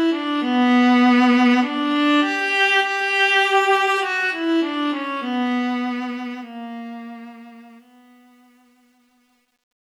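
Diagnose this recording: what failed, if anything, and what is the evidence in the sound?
Truncation distortion on a fade runs from 5.0 to 9.85 s and is worst from 6.84 s to the end. The fade-out, starting around 5 s, reaches a sample-format conversion without dither. The tail turns gritty, consistent with only about 10 bits surviving.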